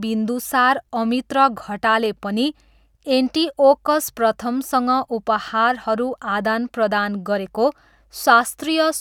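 A speech recording, and nothing is technically wrong with it.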